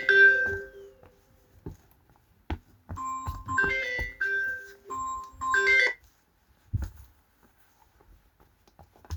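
Compressed frames skipped at 3.57 s and again at 4.89 s: at each point whole blocks of the encoded audio never reach the output, so the sound lurches forward instead of playing continuously. The first jump loses roughly 50 ms, which fits about two 24 ms frames, and the second roughly 70 ms, about three.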